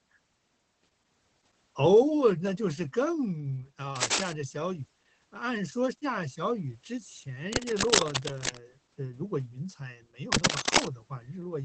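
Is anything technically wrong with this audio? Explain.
Yes. The whole clip carries Opus voice compression damage, and three bursts of cable scratch noise sit over the speech.

Opus voice compression runs throughout. The speech is coded with the SILK linear-prediction coder, and nothing reaches above about 8.6 kHz, which fits its wideband mode. The excitation is coded coarsely, which points to a low bitrate of around 12 kbps. The voice sounds muffled, hoarse and faintly robotic. It differs from a simple low-pass filter: the dullness comes with that grainy, synthetic texture in the voice itself.

Cable scratch noise appears at 3.96 to 4.33 s, 7.53 to 8.59 s and 10.32 to 10.87 s. The likely cause is a worn cable, connector or control being moved, so its contact resistance jumps about rapidly. Each burst is a dense, uneven scratching or rustling. The first and last rise a little above the speech, and the middle one is about as loud as it. 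Unlike dropouts or clicks, the speech continues underneath, buried rather than cut.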